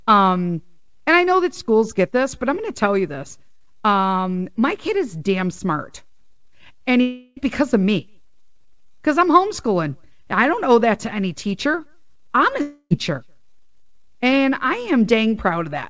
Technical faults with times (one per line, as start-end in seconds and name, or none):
7.01-7.39 long network dropout
12.61-12.93 long network dropout